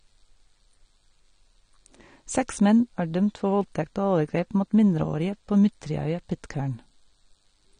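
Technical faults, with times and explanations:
Throughout, AAC compression. The speech sounds dull and smeared, and the codec damage is plainly audible. Nothing reaches above 9.7 kHz, so the top of the spectrum is simply gone. Sibilants turn fizzy and sustained sounds take on a warbling texture. The likely cause is AAC-LC coding at a low bitrate, which fits about 32 kbps. The encoder drops the high band and coarsely quantises what remains, leaving holes in the spectrum and swirling artefacts.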